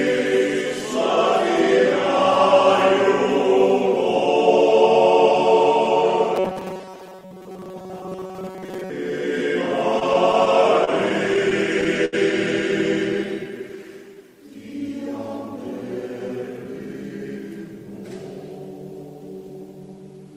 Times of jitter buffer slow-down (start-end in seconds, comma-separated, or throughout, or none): 13.25-14.24